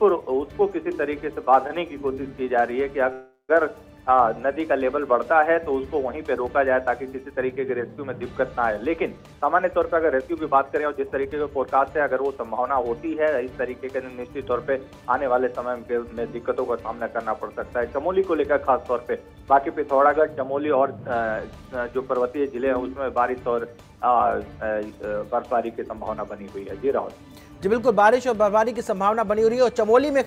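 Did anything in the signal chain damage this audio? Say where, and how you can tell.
Yes. In the network path, from 3.13 to 3.51 s, the sound stops advancing. The last sound stretches into a fading buzz that ends in about 100 ms of silence, then the audio resumes exactly where it stopped, with nothing lost. This call audio freeze adds 361 ms of delay, likely because packets were held up in transit and the jitter buffer ran dry.

At the jitter buffer, from 9.18 to 12.29 s, the audio runs at 111% speed with unchanged pitch and sounds hurried. This jitter buffer speed-up repeatedly cuts short pitch-period slices to shed the excess buffered delay, removing roughly a third of a second in total.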